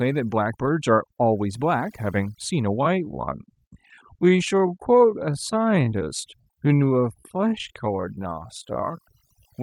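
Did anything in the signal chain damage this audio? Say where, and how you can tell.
Yes. Overdone noise removal runs through the whole speech clip, a call-processing or post-processing stage pushed too hard. The background collapses to near silence dotted with twinkling specks, and the voice's quieter components are pulled down along with the noise. On a spectrogram the noise floor looks unnaturally black, with isolated bright dots flickering in and out, and the voice's weaker harmonics and upper detail appear patchy and eaten away.

From 2.77 s to the end, the pace drops abruptly to about 0.625 of normal speed while the pitch stays the same. This is a time-stretched section, likely caused by software lengthening the audio to fit a slot, keeping pitch by repeating short segments. The slowed part drags. On the waveform, syllable envelopes become longer from 2.77 s onward. On a spectrogram, harmonics keep their spacing but stretch sideways.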